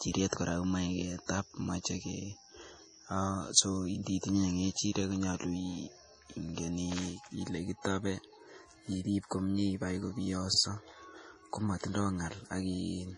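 Speech, heavily damaged throughout by what is likely MP3 compression at a low bitrate, consistent with around 32 kbps: nothing survives above 10.5 kHz, weak components flicker in and out so the voice sounds watery, and a spectrogram shows a hard ceiling with speckled, patchy holes below it. There are also overlapping chunks at 6.49 s and 10.54 s, about 4 s apart, where each new chunk restarts about 48 ms before the previous one ended, replaying that stretch as a brief stutter; the waveform shows a discontinuity and a duplicated segment at each join.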